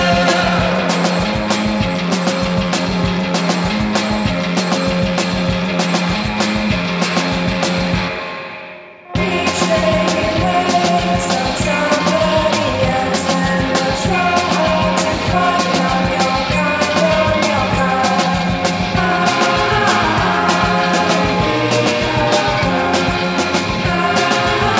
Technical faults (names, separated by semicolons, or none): none